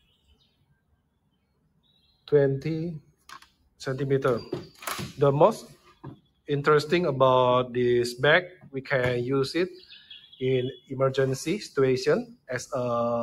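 A noise suppressor designed for speech has been left running on this audio, and it treats sustained tones, ambience and decay as noise to be removed. Across the whole clip the level swings by roughly 15 dB as the suppressor keeps clamping down and releasing. Sharp onsets pass through while the held parts sink beneath them, so the sound pumps and thins. That sets it apart from ordinary compressor pumping, which ducks the sound after loud peaks rather than after quiet, steady stretches. The suppressor also cuts particular passages well below the rest: 0.0 to 2.29 s (about 21 dB down), 3.0 to 3.8 s (about 20 dB), 4.67 to 4.82 s (about 10 dB), 5.67 to 6.49 s (about 21 dB), 8.49 to 8.8 s (about 16 dB), 9.7 to 10.39 s (about 11 dB), 10.74 to 10.92 s (about 15 dB) and 12.25 to 12.49 s (about 21 dB). These are not dropouts. The sound sinks and its tails are shortened rather than vanishing abruptly, and sudden attacks inside these spans mostly still come through.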